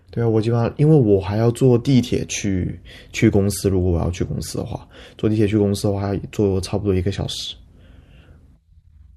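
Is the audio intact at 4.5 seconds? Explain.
No. At 4.50 s the speech has chunks out of order. A chunk of about 5.33 ms was delivered or written one chunk late, so it plays after the chunk that should follow it. No audio is missing, but the sequence is swapped, which creates three abrupt waveform discontinuities within about 11 ms. The result is a brief garbled moment where the swapped pieces meet.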